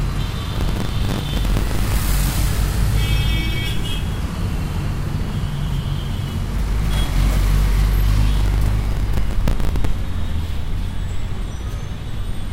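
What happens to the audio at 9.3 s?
At 9.3 s you're right in the middle of a processor overload crackle running from 8.36 to 9.85 s. The processor keeps missing its deadlines on buffers of around 10 ms, dozens of times over the stretch, and each miss replays a hard-edged scrap of old audio, so the sound gets a gritty, tearing crackle.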